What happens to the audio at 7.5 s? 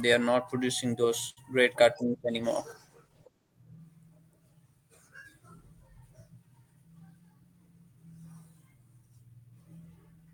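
Right at 7.5 s you're inside a jitter buffer speed-up that runs from about 7.00 to 7.61 s. The receiver trimmed around 70 ms of pitch-period-sized slivers to drain excess buffered audio, so the speech plays roughly 10% faster at unchanged pitch and sounds briefly hurried.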